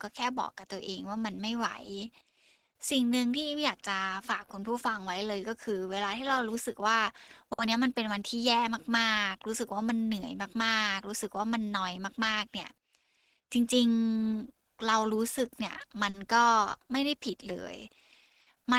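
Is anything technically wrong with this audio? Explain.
Yes. The speech shows clock drift between sender and receiver, with timing corrections and short stalls.

Clock drift between sender and receiver runs through the whole clip. The sender's clock is running roughly 3 percent slow relative to the receiver's, so audio arrives a little more slowly than it is played out. This is a steady mismatch rather than a network problem. That distinguishes it from ordinary jitter, whose timing errors come and go without a consistent direction.

Repeated timing corrections run from 0.26 s to 17.53 s. To keep in step with the slow sender, the receiver repeatedly repeats short pieces of audio, stretching playback to about 97 percent speed and adding roughly half a second in total. The edits all go the same way but are unevenly spaced. They are heard, if at all, as small hiccups or an unsteady tempo. Because they are spread across the clip rather than concentrated in one place, they are unlike a single dropout or a single stall.

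Short stalls from a late packet occur at 7.53 s to 7.59 s (50 ms), at 16.10 s to 16.15 s (40 ms) and at 18.42 s to 18.48 s (50 ms). In each case the jitter buffer ran empty because a packet was late. The receiver held the last sound until the packet arrived, then resumed from the same point. Nothing is lost, and that separates these stalls from packet loss. What the listener hears instead is a sound held too long, with a brief buzz or dip.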